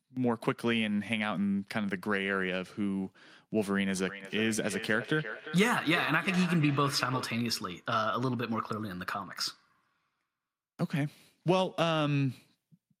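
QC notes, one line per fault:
4.08–7.3 s: feedback echo between two devices. The speech comes back at a fixed spacing of roughly 0.4 s, each pass thinner and more ringing, with the strongest repeat about 9 dB below the direct speech. A second device in the same room is playing this call's audio aloud, and this microphone picks it up again. The local echo canceller only removes its own playback, so that re-entering sound passes through and recirculates.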